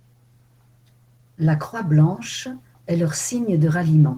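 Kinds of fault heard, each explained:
Opus voice compression: speech is hoarse and faintly robotic throughout but keeps full treble, which fits hybrid coding near 16 kbps, unlike plain low-pass muffling.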